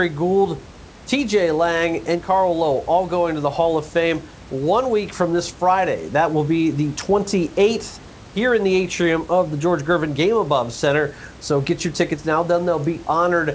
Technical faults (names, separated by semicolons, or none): none